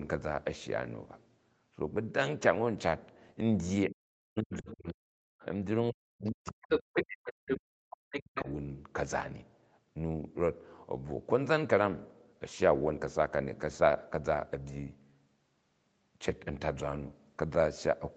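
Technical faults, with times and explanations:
3.87–5.20 s and 5.90–8.48 s, speech suppressed in double talk: the main talker's voice drops sharply, by up to about 40 dB, for roughly 1 s and then 2 s in total. This is likely the echo canceller muting both voices while the two sides overlap. Unlike leakage, the problem here is the talker's own voice disappearing.
4.53–4.93, 5.40–5.45, 6.26–6.31, 6.69–7.03, 7.48–7.57 and 8.11–8.52 s, other side's voice leaking through: a second voice appears. It ranges from about 30 dB below the talker to roughly equal at 6.69 and 7.48 s, and is likely loudspeaker echo the canceller did not remove. It is an added voice, not a loss of the talker's voice.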